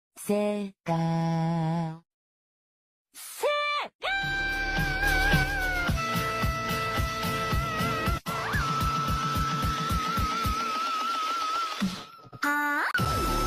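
At 5.03 s the level steps up by about 5 dB in a single instant and stays there until 5.43 s, when it drops back just as abruptly. This is a sudden gain jump, likely from a digital gain setting being applied with no ramp. The background noise rises and falls in exact lockstep with the sound, which separates it from automatic gain control pumping, where level swells and recovers over a smooth, audible time course.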